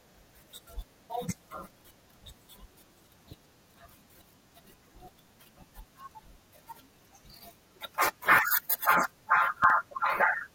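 A loud pop appears near the end of this speech clip, between 9.64 and 9.72 s, as two sharp pops in quick succession that peak a few decibels above the speech, which carries on underneath them. The likely cause is a sudden voltage step or pulse entering the signal chain, from a plug being seated, a switch, a static discharge or a driver glitch. The circuitry after that point shapes each pulse into a short thump.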